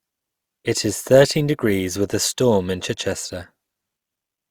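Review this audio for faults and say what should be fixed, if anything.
Nothing to fix: no faults turned up anywhere in the speech.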